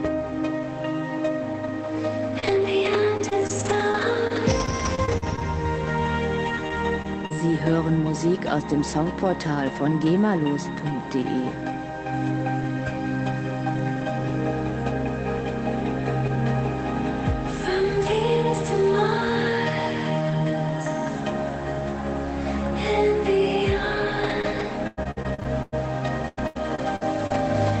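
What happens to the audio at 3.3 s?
Around 3.3 s the audio sits inside a run of repeated packet loss (robotic sound) from 2.39 to 5.43 s: packets kept going missing, and each gap, the longest about 43 ms, was patched by extending the previous sound. The result is choppy audio with brief pieces missing.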